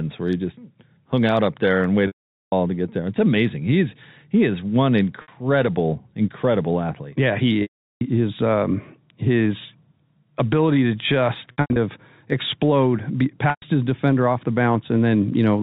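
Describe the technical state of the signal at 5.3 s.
Right around there you're hearing packet loss with pitch repetition, running 5.22 to 5.28 s. About 60 ms of audio went missing, consistent with a couple of dropped packets, and the receiver filled the hole by looping the last pitch period and fading it, so it comes across as a brief held, buzzy smear before the speech cross-fades back in.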